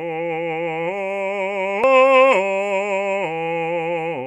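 Damaged data in a compressed stream at 1.84 s: corrupted bytes make the decoder lose frame sync and resync, giving a brief glitch in the music.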